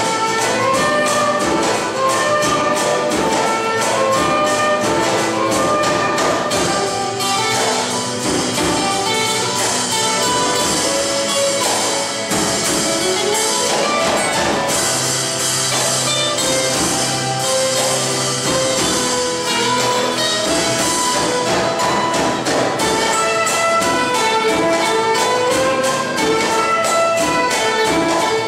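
No technical faults can be heard anywhere in the recording, and the signal stays steady and intact throughout.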